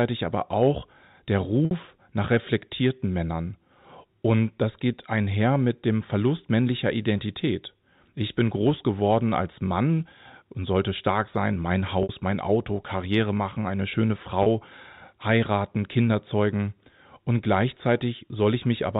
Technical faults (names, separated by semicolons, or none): packet loss with pitch repetition